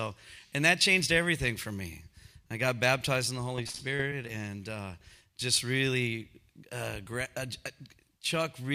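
Repeated packet loss (robotic sound) runs from 3.56 to 4.29 s in this audio. Across that stretch, the sound points to about ten short dropouts, none longer than about 30 ms, each patched by stretching the last received sound forward before the next loss arrives. The patches add up to roughly 160 ms, about 22% of the span, and the fast alternation of real and filled sound gives it a choppy character with pieces missing.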